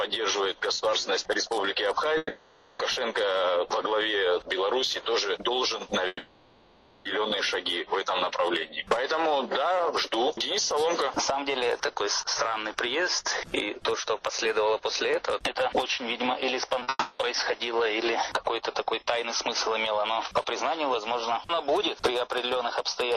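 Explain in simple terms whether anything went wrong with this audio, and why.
Three gaps, at 2.17 to 2.81 s, 6.07 to 7.07 s and 16.89 to 17.21 s, are a long network dropout, likely: the last sound stretches into a fading buzz, and the missing part never returns.

At 16.79 to 16.89 s, two short concealed packet losses cause only a brief smear, too short to fade away like a dropout.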